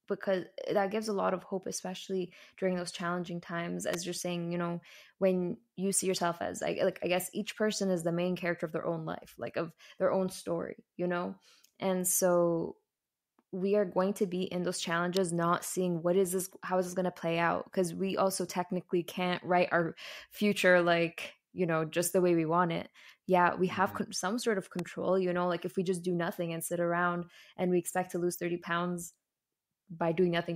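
Three sharp snaps sit on top of the speech, and they sound like an electrical switching spike each time: a very brief click riding over the audio rather than a gap in it. The first comes at 3.94 s, right after "during those challenging times", then another at 15.17 s after "to be in those", both peaking around -15 dBFS. The last, at 24.79 s after "some sort of", is a little quieter. Each is likely a nearby switch, motor or static discharge arcing into the audio line.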